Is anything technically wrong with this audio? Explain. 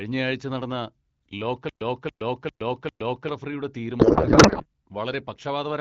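Yes. There are two faults.

From 1.69 to 3.29 s there is a stutter with silent gaps. A fragment of about 0.28 s plays, then about 0.12 s of dead silence follows. This repeats four times, every 0.4 s. The likely cause is a stalled stream replaying its last buffer on each retry. The audio meant for that stretch is lost.

From 4.00 to 4.66 s there is a codec payload misread. The speech turns into garbled noise and warble that barely tracks it. This points to octet-aligned AMR frames being decoded as bandwidth-efficient. With the bit fields shifted, the decoder builds nonsense from valid-looking frames.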